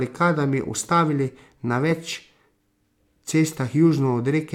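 No technical faults can be heard in this recording.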